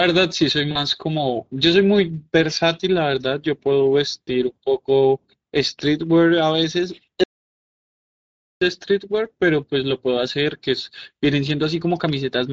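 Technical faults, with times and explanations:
Throughout: Speex codec. The speech sounds hoarse and grainy, with a noise-like edge where the fine detail should be. This fits a Speex setting around 16.8 kbps, where the CELP coder has too few bits to model the excitation faithfully, so it substitutes a rough approximation.
0.71–0.78 s and 4.26–4.29 s: VoIP packet loss concealed by the speech codec. About 40 ms goes missing each time, consistent with two lost frames. The decoder stretches its last pitch and filter into a brief buzzy tone or coloured noise that fades, and the voice stays weak or distorted as it recovers.
7.24–8.61 s: audio dropout to silence. The sound cuts off abruptly and leaves about 1.4 s of silence with no room tone before resuming mid-flow. The input feed was likely interrupted while silence kept being written, so that stretch of speech is gone.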